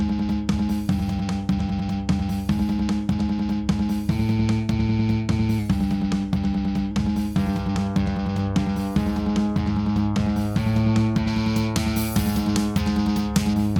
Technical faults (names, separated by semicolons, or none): drift correction step; pre-emphasis left on